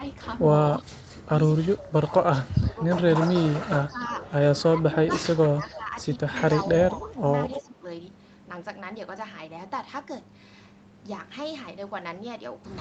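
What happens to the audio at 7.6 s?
Speech suppressed in double talk runs from 6.97 to 7.85 s: the level dips by around 10 dB, in pieces adding up to about half a second. The likely cause is an echo canceller that, with both sides talking at once, couldn't separate this talker from loudspeaker echo and turned both down. An echo leak sits inside that stretch, from 7.5 to 7.63 s: a brief, faint copy of the voice arrives 292 ms late, roughly 15 dB below the speech, likely because the far side's echo canceller let part of its loudspeaker pickup slip back into the call.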